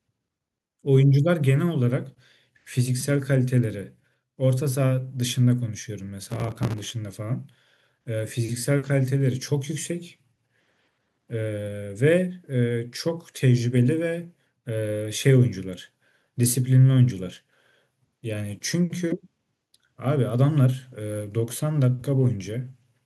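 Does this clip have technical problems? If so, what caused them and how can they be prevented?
Yes, there's processor overload crackle in two bursts, from 6.23 to 6.91 s and from 11.00 to 11.24 s. The processor couldn't finish its tiny audio buffers on time, so many deadlines slipped in a row, each one replaying a scrap of old audio with hard edges. The buffers were around 5 ms. To prevent it, raise the buffer size or free up CPU during recording.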